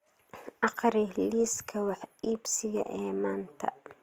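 Across the whole speech clip the sound is rough and grainy, with fine detail smeared into noise. This is likely Opus compression in its music mode at a low bitrate, around 24 kbps. A spectrogram shows filled-in bands with noisy texture, not clean harmonics.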